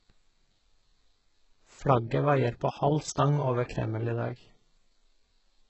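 From start to finish the speech carries heavy codec damage, most likely HE-AAC compression at a very low bitrate, around 8 kbps. Nothing is present above 8 kHz, and the upper band that remains sounds synthesised rather than captured: treble built by spectral band replication, copied up from lower bands and shaped only coarsely, so its harmonics fail to line up with the real content below. Sibilants come out gritty and lispy, with a metallic edge.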